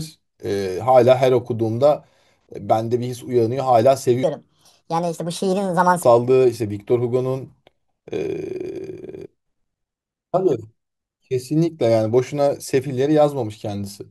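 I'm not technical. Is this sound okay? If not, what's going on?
No. From 4.23 to 6.03 s there is a section at the wrong speed: the speech runs about 1.46 times too fast, so it sounds rushed and roughly seven semitones higher. The likely cause is that stretch being played back against the wrong clock.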